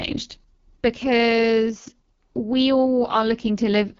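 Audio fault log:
Throughout: AMR wideband (HD Voice) codec, heavily coded. Speech sounds rough and raspy with nothing above 7 kHz, which fits the lowest rate, around 6.6 kbit/s.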